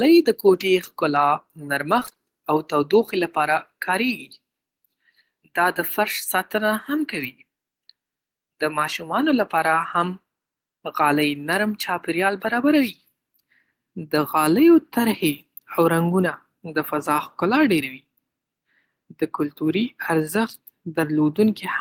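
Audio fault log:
1.99–2.19 s, repeated packet loss (robotic sound): five gaps in quick succession, each up to 23 ms, were patched by repeating the preceding speech, leaving nearly half the stretch choppy.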